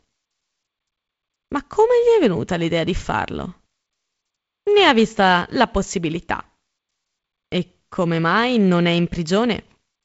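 The speech shows no technical fault, with content stopping around 7.7 kHz, as expected of G.722 wideband telephone coding, and a faint upper-band hiss and slight lower-band graininess that fit the codec's 48 kbit/s mode.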